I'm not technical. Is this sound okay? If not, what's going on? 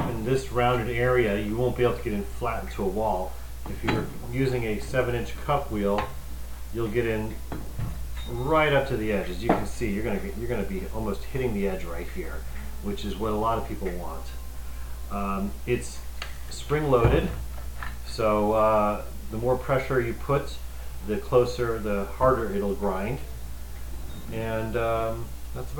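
No. From start to finish there is a steady, even hiss sitting under the sound. This is low bit depth with dither: the audio is stored with very little detail, and a small amount of random noise was mixed in before rounding so the coarse steps turn into smooth hiss instead of harsh distortion. The hiss is fairly loud compared with the sound itself, which fits 8-bit audio.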